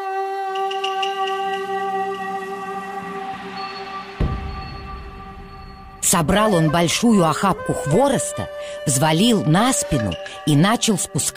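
No technical faults can be heard anywhere in the audio, and the signal holds steady and intact from its first moment to its last.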